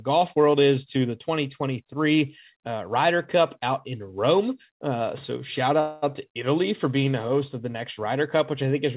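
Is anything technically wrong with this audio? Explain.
Yes. From 5.80 to 6.04 s the speech stops advancing, and its last sound is drawn out into a buzzy or hissy tail that fades over about 0.22 s. This is a call audio freeze. The likely cause is packets held up in transit, which left the jitter buffer empty so the receiver stretched what it already had. Unlike packet loss, nothing is skipped: the speech picks up exactly where it paused, only 222 ms later. Throughout the clip, the narrowband call path cuts off everything above 4 kHz.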